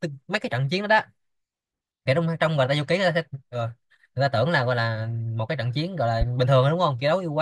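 A speech clip with a single loud pop from 6.21 to 6.25 s, a sharp thump peaking about 10 dB above the speech. The speech continues unbroken underneath, which separates it from a dropout or an edit click, where the signal itself is interrupted. It is one isolated event with a brief body rather than a hairline tick, so it is not crackle or digital clicking. The likely cause is a voltage step from a plug, switch or static discharge.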